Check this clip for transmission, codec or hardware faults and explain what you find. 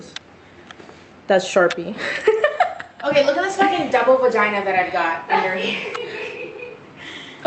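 No faults found here.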